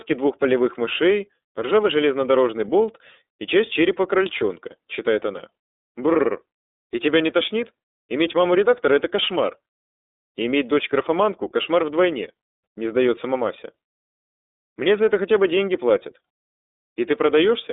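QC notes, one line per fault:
Throughout, iLBC codec: speech confined to a telephone band near 300 Hz to 3.7 kHz, plainly rough and synthetic, each 30 ms frame coded independently, unlike codecs that lean on the frame before.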